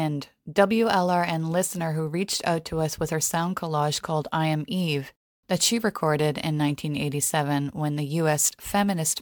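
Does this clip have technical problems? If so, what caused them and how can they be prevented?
No, no technical problems can be heard here.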